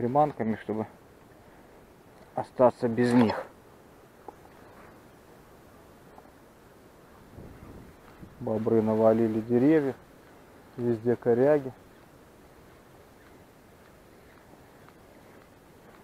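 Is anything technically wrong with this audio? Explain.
No, nothing technically wrong can be heard in this audio. There is nothing here that calls for a technical explanation.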